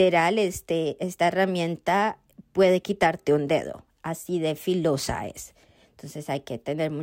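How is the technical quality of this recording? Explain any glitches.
No technical glitches can be heard anywhere in this speech recording. There is nothing in the audio that needs explaining.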